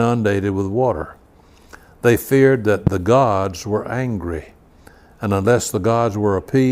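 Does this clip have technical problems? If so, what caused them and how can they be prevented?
Yes. A single loud pop sits between "feared that" and "the gods were angry", from 2.87 to 2.90 s, peaking roughly 15 dB above the speech while the speech continues beneath it. A brief voltage step or pulse, likely from a connector being disturbed, a switch, a static discharge or a driver glitch, was added to the signal and shaped by the following circuitry into a sharp thump. Securing cables, grounding equipment properly and avoiding switching or handling gear while recording prevents it.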